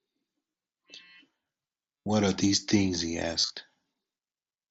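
Concealed Bluetooth headset packet loss at 0.51–0.54 s, 2.02–2.06 s and 3.39–3.50 s: dropped headset packets are filled by repeating recent waveform, leaving brief buzzy, held patches with a slight warble on recovery.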